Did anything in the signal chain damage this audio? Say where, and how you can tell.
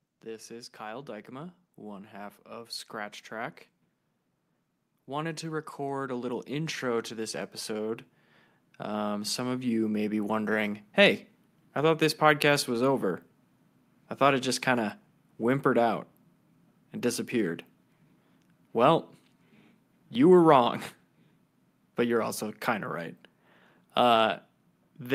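Yes. Automatic gain rising in the call processing stage lifts the speech twice: from 0.23 to 3.6 s the level climbs by about 5 dB, and from 5.06 to 10.43 s by about 10 dB. The gain control judged the input too quiet and raised its gain step by step. What distinguishes this from a talker moving closer to the microphone is that the background noise swells along with the speech, smoothly, over several seconds.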